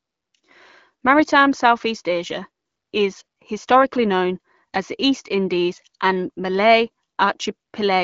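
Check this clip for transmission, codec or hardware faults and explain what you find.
Nothing faulty turns up anywhere in this speech clip.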